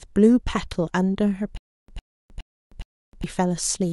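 From 1.57 to 3.24 s the speech breaks into a stutter with silent gaps. A 105 ms fragment repeats four times, each followed by about 311 ms of dead silence, every 416 ms. The likely cause is a stalled stream replaying its last buffer. The audio meant for that span is lost.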